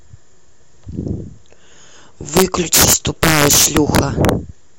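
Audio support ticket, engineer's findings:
Integer overflow, 2.37 to 4.29 s: violent cracks on loud speech peaks, harsher than clipping. Gain stage driven about 8 dB past full scale wraps instead of saturating. Waveform: peaks flip rail to opposite rail. Spectrogram: full-band vertical streaks.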